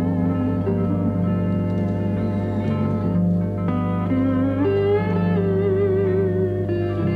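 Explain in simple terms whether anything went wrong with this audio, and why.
Mains hum runs through the whole clip, a steady 50 Hz drone almost as loud as the sound itself, picked up from the power line through a ground loop or nearby transformer.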